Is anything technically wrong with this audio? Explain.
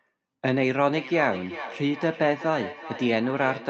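Yes. From 0.9 s to the end there is feedback echo between two devices. A second device in the room replays the call. This microphone recaptures it. Speech returns about every 0.4 s, thinner and ringing, peaking about 12 dB below the speech.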